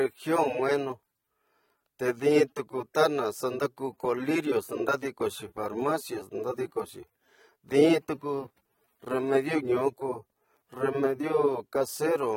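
From start to finish the speech carries plainly audible AAC compression, likely from an AAC-LC encoder at a low bitrate, which fits about 32 kbps. The quantiser has thrown away detail it judged inaudible, so the voice sounds dull and smeared, with a fizzy, warbling edge on sibilants. On a spectrogram, energy stops at a flat shelf near 16.5 kHz, and the upper bands show patchy holes and blotches.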